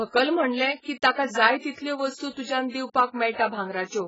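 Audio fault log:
Throughout, AAC compression: the speech is dull and smeared, with nothing above 7.6 kHz, so the top of the sibilants is simply gone and what's left has a watery, swimmy edge. That's likely heavy lossy coding. An AAC-LC encoder squeezing this hard drops the high band entirely and quantises what remains very coarsely, and the amount of damage here fits a very low bitrate, somewhere around 12 kbps.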